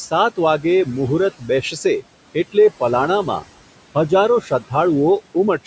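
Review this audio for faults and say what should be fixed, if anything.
Noise suppressor artifacts run throughout: the suppressor pulls the room noise down about 18 dB between phrases, so the leftover background pumps as it rises under the speech.

Speech cut by the noise suppressor at 1.39–1.49 s and 4.41–4.72 s: the suppressor mistook soft speech for noise and dropped it about 15 dB, then about 18 dB, leaving those sounds swallowed.

To prevent both, use a gentler suppression setting with less attenuation and slower gain changes, so the room noise and quiet speech sounds aren't treated alike.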